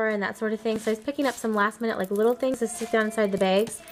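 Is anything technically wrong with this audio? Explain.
Yes. At 0.76, 2.54 and 3.38 s the sound jumps, skipping roughly 20, 40 and 20 ms. This is likely a dropped buffer (overrun), with overwritten samples lost.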